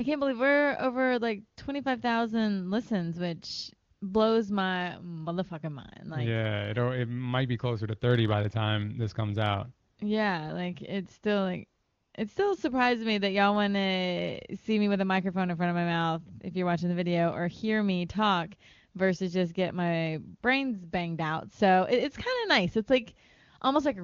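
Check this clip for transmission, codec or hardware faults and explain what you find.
One fault appears: AMR comfort noise, heard three times over the wideband AMR link, whose coding stays clean, fitting its top 23.85 kbit/s mode.

AMR comfort noise: at 3.93 to 4.01 s (80 ms, after "listens which", before "blows my motherfucking mind"), 9.91 to 9.97 s (60 ms, after "time this comes out") and 11.83 to 12.13 s (300 ms, after "like it's still like", before "it still surprised me"), the sender judged the line silent and stopped sending speech frames. The receiver substitutes smooth synthetic noise, so the real background briefly drops out and returns.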